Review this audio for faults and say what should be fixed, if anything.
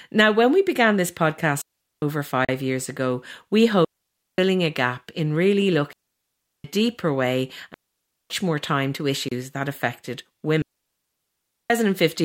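Speech here suffers digital wireless dropouts at 1.62–2.02 s (after "when we began this"), 3.85–4.38 s (between "years ago we" and "a gap in really"), 5.93–6.64 s, 7.74–8.30 s and 10.62–11.70 s, muting for 0.41 to 1.08 s. Each time the receiver lost too much data and muted with a quick fade. On a spectrogram each one is a clean blank column, and on a waveform a flat gap with no noise burst at either edge.

Two much shorter silences, a Bluetooth stall at 2.45–2.49 s (38 ms) and another at 9.29–9.32 s (29 ms), likely came from interference holding up packets until the headphone buffer ran dry. They show as thin empty slivers on the spectrogram and brief flat notches in the waveform.

To prevent both, keep the transmitter close to the receiver with a clear line of sight, move away from competing 2.4 GHz traffic, and use a wired connection when recording or monitoring matters.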